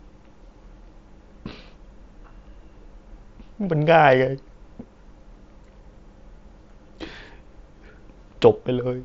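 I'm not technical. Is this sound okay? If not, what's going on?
No, not quite. At 1.50 s there is concealed Bluetooth headset packet loss. A tiny piece of sound went missing, and the phone patched the gap by repeating recent sound, so it is barely noticeable.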